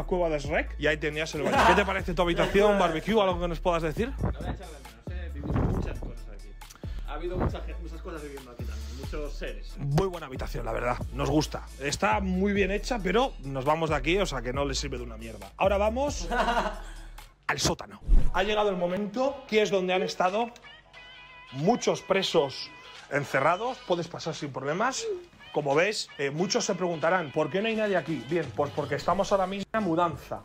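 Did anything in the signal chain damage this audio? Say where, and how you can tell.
Yes. There are short skips at 3.00, 6.99, 10.98, 14.98 and 18.97 s, spaced about 4 s apart. Each drops only a few milliseconds, and the sides join with no silence. This is audio missing between chunks, likely at the recorder's buffer stage, losing a sliver at each handover.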